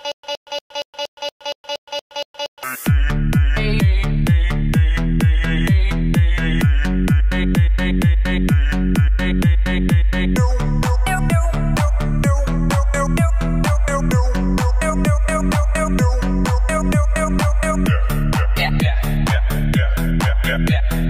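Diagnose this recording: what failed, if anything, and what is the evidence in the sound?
Stutter with silent gaps from 0.00 to 2.63 s, already under way at the start. A 117 ms burst repeats every 234 ms, with 118 ms of digital silence between. This is likely a stalled playback buffer replaying its last fragment.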